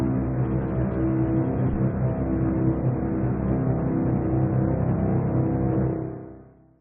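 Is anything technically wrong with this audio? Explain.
No, nothing in this audio stood out as a technical problem on listening.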